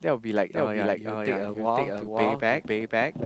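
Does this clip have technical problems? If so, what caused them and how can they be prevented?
Yes. A doubled audio track runs through the whole clip, most likely because the speech is captured a second time by a slower path. A second, full-band copy of the speech trails about half a second behind at roughly the same loudness, with no decay or room colouring. To prevent it, route the source through only one capture path or mute the duplicate monitor or loopback feed.

A call bitrate drop begins at 1.22 s and lasts to the end. The call's bandwidth estimate fell, and the encoder cut from 32 kbps to 15 kbps, staying at the lowest rate for about 1.2 s. The speech turns coarser and rougher under that tighter coding. To prevent it, give the call a steadier connection with more spare bandwidth, such as wired networking or fewer competing uploads.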